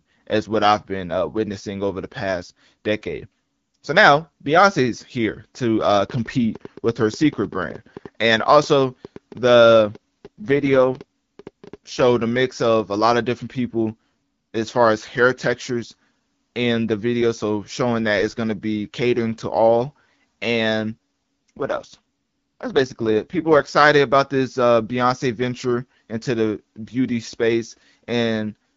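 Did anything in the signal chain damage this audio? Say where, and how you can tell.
Yes. Irregular ticking runs from 5.81 to 12.42 s, about 7 clicks per second and roughly as loud as the speech. This train of clicks is likely interference or a struggling interface at the analogue or converter stage.

Speech turns rough and synthetic from 9.86 to 12.04 s and from 20.92 to 23.68 s. These are AMR rate drops on the network link, with the AMR-WB codec falling from 12.65 to 6.6 kbit/s.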